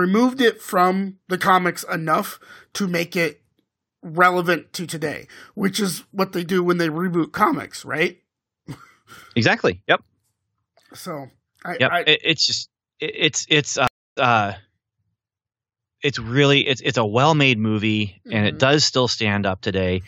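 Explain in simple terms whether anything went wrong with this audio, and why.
Something did go wrong, around 13.87 to 14.28 s: a stream reconnect. The connection dropped, the speech went quiet for about 0.29 s, and when the player reconnected it picked up 0.12 s earlier, so you hear a short bit of speech twice.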